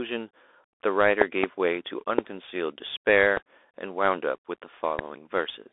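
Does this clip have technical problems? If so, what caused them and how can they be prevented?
Yes. The speech was carried over a Bluetooth CVSD headset codec, the narrowband hands-free link. It codes the signal as a single up-or-down bit per sample with an adapting step size, at a rate that fits 64 kbps CVSD. The line is confined to roughly 300 Hz to 3.6 kHz, with nothing above 3.8 kHz, so the audio sounds thin and muffled. The codec damage is plainly audible: s sounds turn scratchy and a granular hiss sits under the speech. Using a wideband headset profile or a wired microphone would avoid this.

There are also loud pops. The likely cause is a sudden voltage step or pulse, from a connector, switch, static discharge or driver glitch, added to the signal and shaped by the circuitry that follows. From 1.22 to 1.46 s two pops arrive in quick succession, peaking about 25 dB above the speech. 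Single pops, about 20 dB above it, fall at 2.18 to 2.21 s, 3.37 to 3.39 s and 4.99 to 5.01 s, and the speech continues underneath each one. Securing connections, grounding the setup and updating audio drivers would prevent them.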